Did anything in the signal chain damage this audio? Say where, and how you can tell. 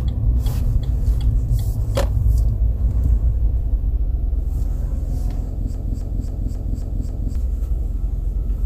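Yes. A broken-record loop runs from 5.75 s to 7.35 s. A fragment about 0.27 s long plays six times back to back, each repeat identical, with no change between passes. The stage is likely the player or stream buffer, stalled and resending the last block it held. Because the same block plays again and again, whatever audio belonged in those 1.6 s is lost rather than delayed.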